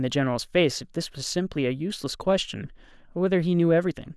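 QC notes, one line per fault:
Nothing to log: no audible faults anywhere in the speech.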